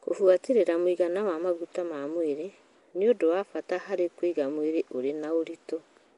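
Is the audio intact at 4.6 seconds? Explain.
No. Nellymoser compression runs throughout, likely Nellymoser Asao. Weak bands become noise, so the speech sounds hissy, smeared and underwater, with nothing above 10.7 kHz.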